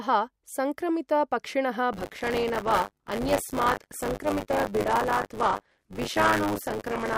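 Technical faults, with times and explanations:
1.92 s to end, buffer tearing: after "संक्रमित पक्षिणः" the speech turns into a robotic buzz at 100 Hz. Writer and reader of the ring buffer have slipped, so each 10 ms period splices in about a fifth of audio from roughly 30 ms earlier, with hard joins.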